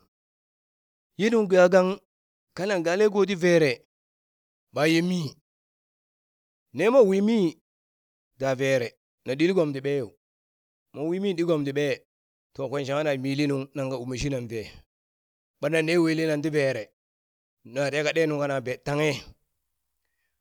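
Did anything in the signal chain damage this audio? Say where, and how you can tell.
No, nothing in the chain damaged this speech; the pauses drop to silence and the background comes back in time for the next phrase, with no loss of speech.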